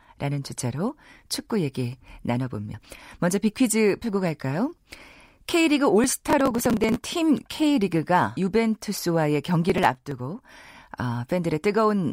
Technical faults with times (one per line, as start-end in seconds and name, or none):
6.04-7.10 processor overload crackle
8.37 compressed frames skipped
9.70-10.19 processor overload crackle